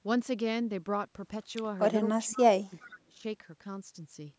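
An echo canceller that could not tell the near talker from the far-end echo during simultaneous talking turned the speech down along with the echo, the likely cause of speech suppressed in double talk. At 2.02 s the voice dips slightly for a brief moment. From 2.25 to 3.25 s it is pulled down much harder, by about 25 dB at its deepest. The call's microphone path, with nothing above 8 kHz, is heard throughout.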